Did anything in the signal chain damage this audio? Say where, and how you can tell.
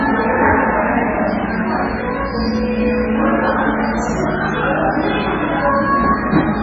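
Yes: MP3 compression damage runs throughout, at the codec stage. Nothing survives above 7.5 kHz, and the sound is heavily watery and swirly, which fits a starved bitrate near 16 kbps. The encoder likely cut the treble and zeroed weak frequency lines, which flicker between frames.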